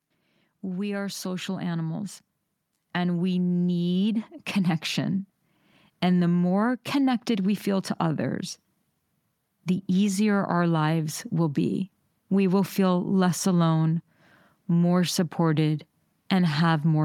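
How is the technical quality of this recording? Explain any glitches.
There is one glitch, early on. From 0.64 to 2.13 s, automatic gain rising: the gain control judged the input too quiet and raised its level by about 4 dB over roughly one and a half seconds, so the speech and the background noise swell up together.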